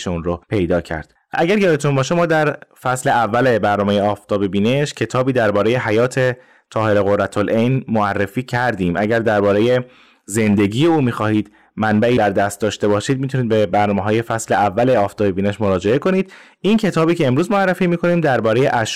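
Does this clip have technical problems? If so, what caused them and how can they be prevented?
Yes. Throughout the speech, the louder syllables carry a harsh, crackly fuzz, as though the peaks are tearing. This is hard clipping: the signal was driven roughly 6 dB past what the recording chain could pass, so a small but steady share of the waveform's peaks were sliced flat. Those squared-off tops generate high harmonics that were never in the original sound, which is the grit heard on every loud moment. Set input gain so peaks stay well below full scale, leaving headroom.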